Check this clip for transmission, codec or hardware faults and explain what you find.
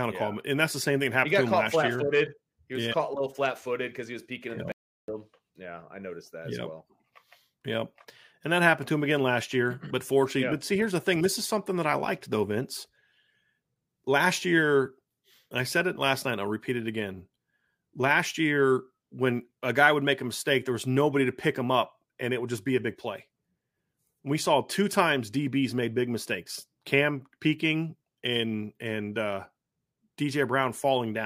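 One fault stands out in the speech: an audio dropout to silence from 4.72 s to 5.08 s, removing about 0.36 s of sound. The speech cuts off mid-flow and resumes abruptly, and the gap is dead silence with no room tone at all. The likely cause is a momentary loss of the input signal, such as a disconnect or mute, while the recorder kept writing zeros. The waveform shows a flat line, and the spectrogram shows a fully black vertical band with hard edges on both sides.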